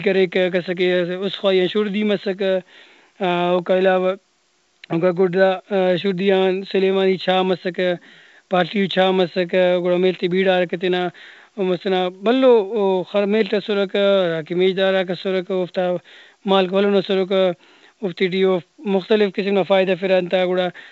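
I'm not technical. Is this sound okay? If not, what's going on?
Yes, nothing in this speech recording needs fixing.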